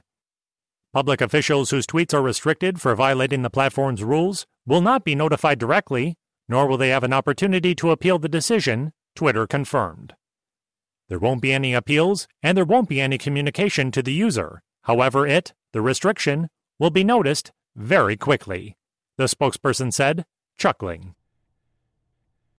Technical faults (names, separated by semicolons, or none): none